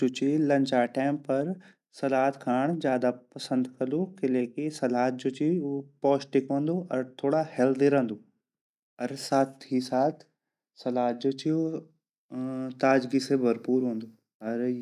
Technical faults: none

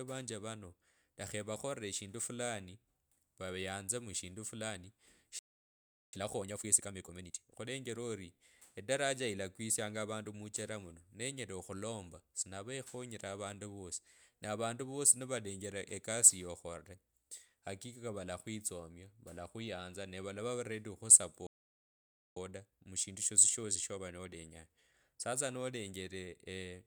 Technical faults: playback stall; time-compressed catch-up

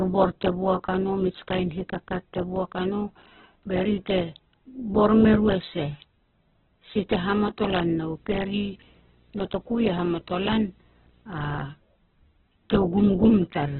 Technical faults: Opus compression; video or display buzz

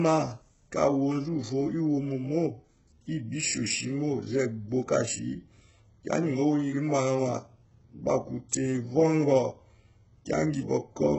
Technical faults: HE-AAC compression

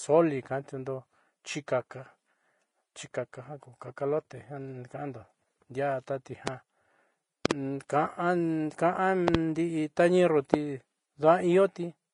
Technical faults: Vorbis compression; loud pop

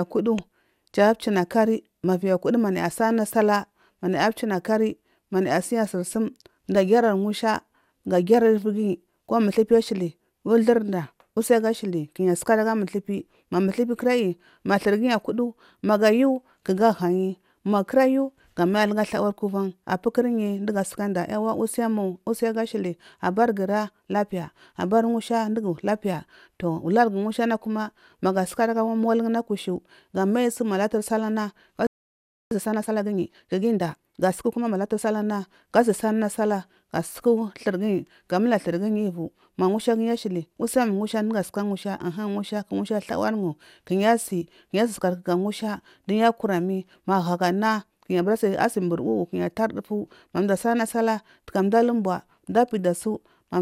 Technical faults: playback stall; time-compressed catch-up

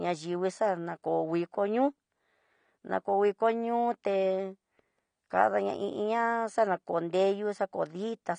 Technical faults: AAC compression

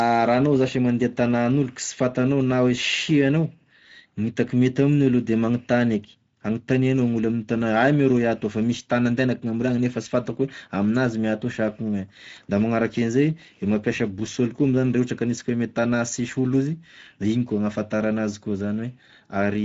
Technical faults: Speex codec

